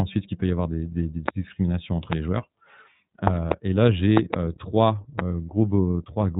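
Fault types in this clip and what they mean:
iLBC codec: The speech passes through a narrowband VoIP codec that codes each 30 ms frame on its own, so it sounds plainly rough and synthetic, consistent with its 13.33 kbps mode. A spectrogram shows nothing above 4 kHz, and the harmonics look smeared and blocky from frame to frame.
loud pop: Sharp pops, about 20 dB above the speech, land on top of the talking, which carries on underneath. There are single pops at 1.28 and 2.13 s and pairs within 3.27–3.54 s and 4.17–4.36 s, likely from electrical glitches. Each appears as a tall, thin spike on the waveform and a full-height vertical stripe on a spectrogram.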